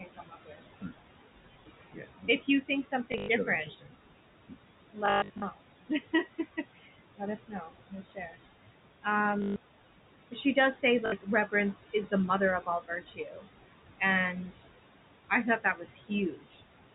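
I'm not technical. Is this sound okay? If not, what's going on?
No. The system has three problems.

First, there are noise suppressor artifacts throughout. A filter meant to remove the steady background noise keeps turning it down between phrases and letting it back up under the speech, so the background seems to pump.

Second, the same filter sometimes mistakes parts of the speech for noise. This speech cut by the noise suppressor happens from 0 to 1.3 seconds, 1.9 to 8.4, 10.3 to 13.5, 14.0 to 14.6 and 15.3 to 16.6 seconds. Soft sounds and word endings get turned down along with the background, totalling a couple of seconds in the longest stretch and under a second elsewhere, so bits sound swallowed or faint.

Third, there is packet loss with the last packet repeated. Small chunks of audio went missing on the way, and the receiving end filled each gap by replaying the last chunk it had. 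You hear this as short robotic stutters at 3.12 to 3.28 seconds, 5.06 to 5.42 seconds (the longest, about a quarter-second lost), 9.42 to 9.56 seconds and 11.06 to 11.12 seconds.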